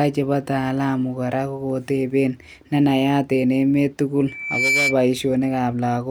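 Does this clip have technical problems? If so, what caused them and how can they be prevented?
Yes. From 4.27 s to 5.00 s there is a loudspeaker feedback squeal: a single tone at 2.3 kHz that swells in under half a second until it sits about 5 dB above the speech. The microphone is picking up the loudspeaker it feeds, and around 2.3 kHz the loop gain exceeds one, so that frequency keeps reinforcing itself until the loop is broken. To prevent it, lower the gain or move the microphone away from the loudspeaker's coverage, and notch out 2.3 kHz on the feed.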